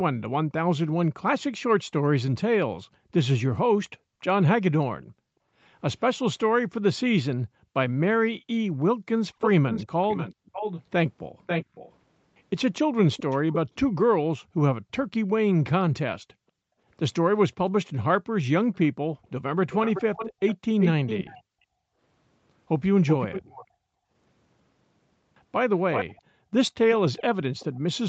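Background gated by the echo canceller runs from 1.61 s to 27.84 s in this speech recording: whenever the far end's loudspeaker is active, the room sound is pushed down by as much as about 40 dB, dipping out for around four seconds in total before recovering. An echo leak appears from 9.4 s to 13.76 s, delayed by 540 ms, and again from 18.74 s to 27.65 s at 380 ms, a second copy of the speech sitting only a few decibels under the direct sound, likely because the far side's echo canceller let loudspeaker pickup back through its microphone.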